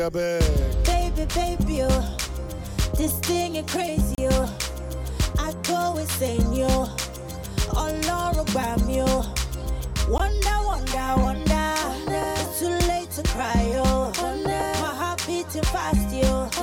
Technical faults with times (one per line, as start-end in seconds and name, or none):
4.15-4.18 gap at a join of encoded pieces
10.18 gap at a join of encoded pieces